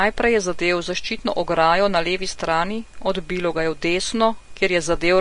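The speech sounds hissy and grainy from start to finish, with a dull top end where nothing is heard above 10.6 kHz, consonant attacks blurred, and the tone of the voice roughened. This is likely Vorbis compression at a low setting, which fits a bitrate of around 37 kbps: the encoder has lowered its cut-off and quantised the remaining treble so coarsely that fine detail there has turned into noise of similar energy.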